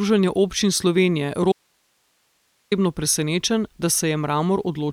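The signal was likely lost upstream from 1.52 to 2.72 s while the chain after the break stayed live, an audio dropout to a faint residue. The speech cuts off abruptly for about 1.2 s, leaving only hiss roughly 45 dB below its normal level.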